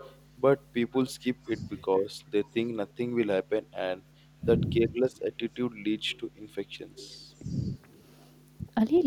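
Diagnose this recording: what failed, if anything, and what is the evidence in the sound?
A faint, delayed copy of the voice trails the speech at 0.0–0.21, 1.05–2.04, 2.46–2.56, 2.88–2.93, 6.11–6.2, 6.96–7.71 and 8.97–9.01 s. It sits roughly 20 to 35 dB below the main voice and lags by 350 ms, then 364 ms from 6.1 s on. This is echo leak in call processing. The far end's loudspeaker output was likely picked up by its microphone, and an incomplete echo canceller sent it back.

Between 1.4 and 1.92 s the voice dips and breaks up in short pieces, totalling about a fifth of a second and falling by up to about 20 dB. The echo is present at the same moment. This is speech suppressed in double talk, also in call processing. With both sides active, the echo canceller likely could not tell the local talker from the returning echo and attenuated both, cutting into the voice.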